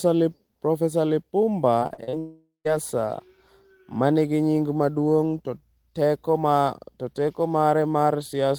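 From 1.79 to 2.15 s you get repeated packet loss, the robotic kind: five short holes, the longest 38 ms, each patched by stretching the previous sound. About 43% of that span is filler, so the speech turns choppy, with roughly 160 ms missing.

Right after, from 2.19 to 2.67 s, the speech vanishes into a fading buzz that decays to about 150 ms of silence before picking up again further on. That's likely a long network dropout, with roughly 0.46 s of audio lost.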